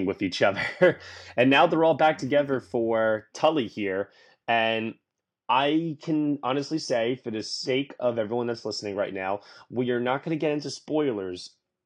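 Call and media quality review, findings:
Adaptive stream at a lower bitrate, 5.49 s to end: player stepped down, no gap. Speech abruptly dulls, nothing above 9.8 kHz; fits about 32 kbit/s.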